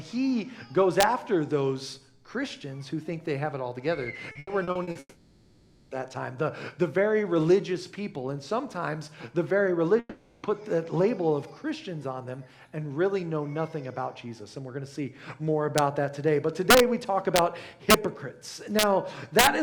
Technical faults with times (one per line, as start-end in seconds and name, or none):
1.00-1.03 integer overflow
4.31-4.98 repeated packet loss (robotic sound)
4.99-5.94 long network dropout
9.99-10.46 long network dropout
15.78 integer overflow
16.70-16.80 integer overflow
17.36-17.39 integer overflow
17.90-17.94 integer overflow
18.79-18.83 integer overflow
19.39-19.47 integer overflow